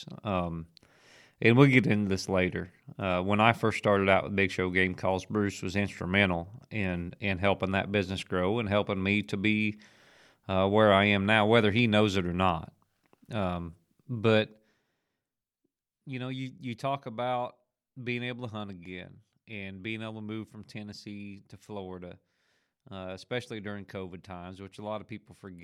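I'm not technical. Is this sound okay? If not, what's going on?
Yes, no faults found in this speech recording; nothing needs fixing.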